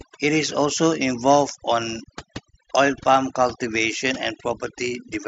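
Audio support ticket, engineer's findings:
Background dropped and broken into twinkling specks; quiet speech detail missing. Throughout. Overdone noise removal: reduction set too strong, pulling individual frequency bands down or out whenever they approach the noise estimate, quiet speech energy included. Bluetooth mSBC headset path audible as wideband speech up to 8 kHz with light grain on loud sounds, consistent with its fixed bit pool.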